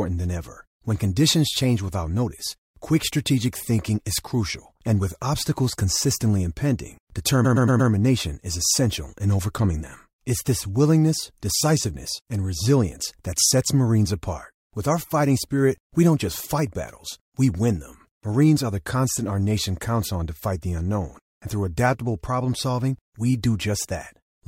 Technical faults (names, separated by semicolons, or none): repeated frames